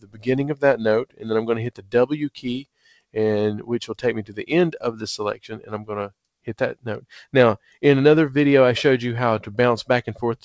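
A speech-oriented noise suppressor has been left on for non-speech sound, and it treats sustained content and decay as noise. Throughout the clip, attacks pass largely intact while held portions and tails are pulled down, with the gain swinging by roughly 10 dB. The result is audible pumping and a thinned, fluttering texture rather than a steady level. The top of the band stops at 8 kHz, consistent with a wideband call path such as G.722 at 64 kbps.

Six passages show sound cut by the noise suppressor more deeply than the rest: 0.00–0.28 s (about 17 dB), 1.05–1.31 s (about 17 dB), 1.71–1.94 s (about 16 dB), 2.60–3.16 s (about 17 dB), 4.21–4.46 s (about 14 dB) and 5.34–5.90 s (about 15 dB). Each dip lasts a few hundred milliseconds. In these spans the steady or fading parts of the sound sink and their decays are truncated, because the suppressor's noise estimate has swallowed them.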